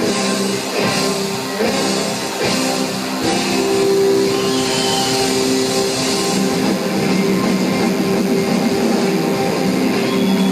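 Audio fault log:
throughout, DECT cordless phone buzz: a DECT handset or base station close to the equipment is transmitting its short radio bursts at a 100 Hz rate, and somewhere in the audio circuitry those bursts are being rectified into the signal path. The result is a steady, thin, rasping buzz with a 100 Hz fundamental and a dense stack of harmonics, sitting roughly 20 dB below the wanted sound and never letting up.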